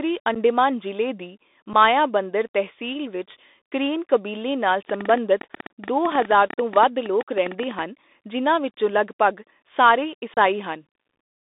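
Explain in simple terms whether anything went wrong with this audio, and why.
Yes, a few things went wrong here. The whole clip went through a Bluetooth CVSD headset codec, which squeezes the speech into a narrow phone-style band of about 250 Hz to 3.7 kHz and leaves an obvious gritty, scratchy texture.

There's also unconcealed Bluetooth headset packet loss. Tiny chunks of audio dropped out and nothing filled the gaps, so you hear brief abrupt holes. These happen at 0.35–0.37 s, at 1.73 s just before "ਮਾਯਾਬੰਦਰ ਤਹਿਸੀਲ ਵਿੱਚ ਕਰੇਨ", and in a longer gap of about 30 ms at 10.34–10.38 s right after "ਜਿਨ੍ਹਾਂ ਵਿੱਚੋਂ ਲਗਭਗ ਸਾਰੇ".

Finally, there's a train of clicks from 4.9 to 7.8 s, between "ਵਿੱਚ ਕਰੇਨ ਕਬੀਲੇ ਨਾਲ" and "ਜਿਨ੍ਹਾਂ ਵਿੱਚੋਂ ਲਗਭਗ ਸਾਰੇ". It's roughly 40 uneven ticks at about 12 a second, likely from nearby electrical interference.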